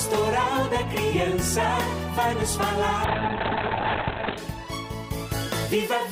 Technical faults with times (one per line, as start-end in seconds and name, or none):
3.05-4.43 call bitrate drop